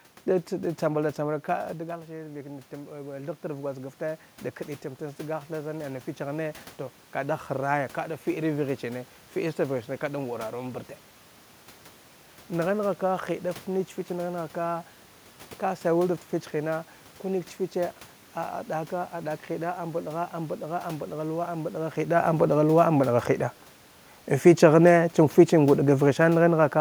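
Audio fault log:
2.07–4.29 s, automatic gain rising: after the talker drifts off the mic at about a second and a half, the input falls by about 11 dB, so the AGC eases its gain up about 4 dB, and the room noise swells along with the voice.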